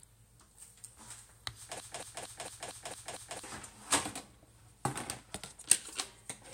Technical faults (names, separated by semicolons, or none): broken-record loop